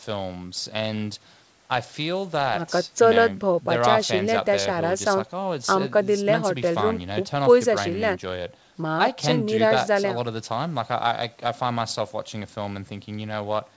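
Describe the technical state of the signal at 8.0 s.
At 8.0 s the speech comes through intact, with no dropout, distortion or glitch, just the steady wideband character of the call's G.722 path, which carries nothing above 8 kHz.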